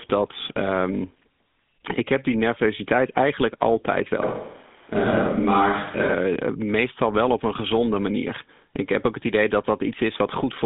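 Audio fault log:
Throughout: GSM full-rate codec. Buzzy, gravelly roughness and a 200 Hz to 3.6 kHz line band with nothing above 3.8 kHz. This fits a 13 kbps GSM full-rate coder, not a plain low-pass filter.
4.22–6.14 s: switch to a distant microphone. After "die nervositeit eigenlijk altijd" the sound abruptly turns roomy and hollow, with thinner bass and faint added room noise, likely from a farther microphone. Level stays about the same until "meestal wel op een", unlike a simple level drop.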